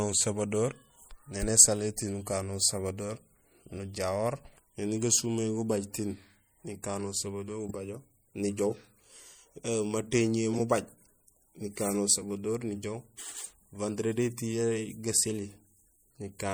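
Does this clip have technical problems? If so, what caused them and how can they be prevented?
Yes. Throughout the speech there is a watery, swirly haze with dulled treble, likely MP3 compression at a low bitrate around 64 kbps, with weak frequency content dropping in and out. Encoding at a higher bitrate prevents it.

Three short glitches come from corrupt frames being decoded: at 7.61–7.71 s just after "tiin nikano", 10.53–10.60 s, and 13.44–13.51 s just after "usabador nijoow". Unlike the constant compression swirl, these are brief bursts of misplaced energy spanning a few frames. Checksums with frame concealment or retransmission prevent them.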